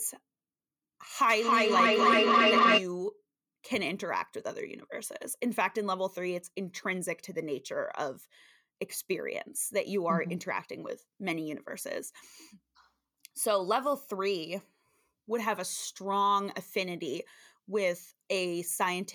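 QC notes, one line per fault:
1.27 to 2.88 s, feedback echo between two devices: the speech comes back at roughly 300 ms intervals, thinner and ringier on each lap, and the repeats build instead of fading, peaking about 8 dB above the speech itself. That's two devices on the same call in one room. One plays the other's mic feed, that mic hears it again, and neither echo canceller touches sound it didn't play itself.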